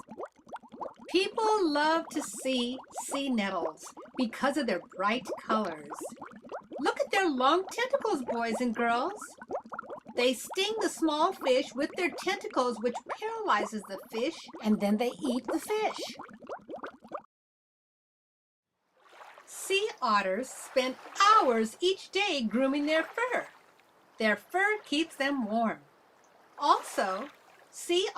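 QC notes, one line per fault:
Nothing to flag here; I didn't catch anything wrong anywhere in the audio.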